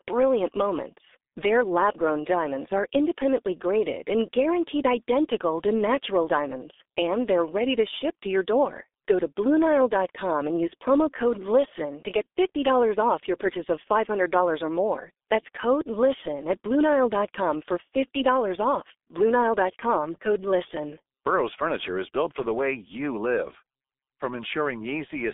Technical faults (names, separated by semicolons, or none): G.723.1 codec